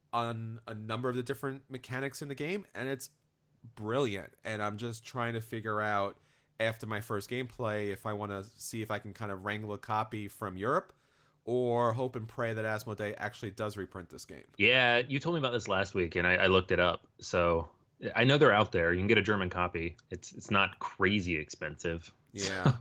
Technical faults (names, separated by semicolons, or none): none